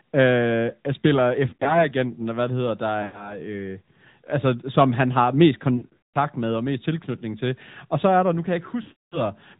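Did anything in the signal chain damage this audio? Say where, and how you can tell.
Yes. At the codec stage the audio went through the AMR narrowband mobile codec. Nothing above 4 kHz survives, and the speech has a plainly buzzy, synthetic edge throughout, which fits a mid-rate mode around 10 kbps. Each 20 ms frame is rebuilt from a coarse vocal-tract model driven by a few pulses.

On the radio or network path, lost AMR speech frames occur at 1.50–1.88, 3.02–3.40, 5.78–6.16 and 8.82–9.21 s. The decoder fills the missing frames by reusing the last pitch and filter settings at falling gain, so the sound smears, warbles and sags. The last two spans are heavier and fade almost to silence before recovering rough.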